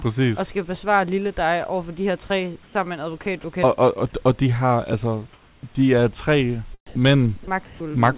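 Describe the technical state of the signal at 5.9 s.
At 5.9 s the speech is intact, with nothing wrong beyond the call path's normal narrowband ceiling at 4 kHz and faint room noise about 36 dB below the speech.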